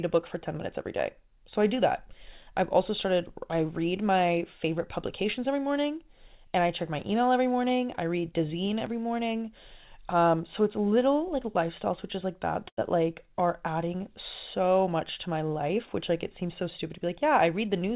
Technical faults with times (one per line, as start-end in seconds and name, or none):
12.68-12.79 short stall from a late packet
15.40-17.09 jitter buffer speed-up